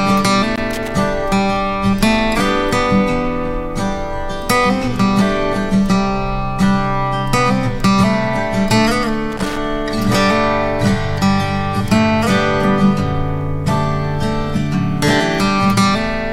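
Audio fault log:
0.56–0.92 s and 9.32–9.58 s: loose connector crackle. Two separate bursts of irregular crackle and scratching, about 0.36 s and 0.26 s long, break into the sound. A worn or dirty contact in the signal path is making and losing contact many times in quick succession as it shifts, so the audio is chopped on and off at random. Each abrupt interruption adds its own click, and together they form the ragged, scratchy texture.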